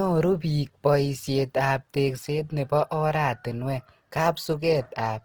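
Opus compression runs throughout this speech clip: the sound turns grainy and rough, likely from low-rate Opus in its music mode, refilling starved bands with noise, at a rate around 16 kbps.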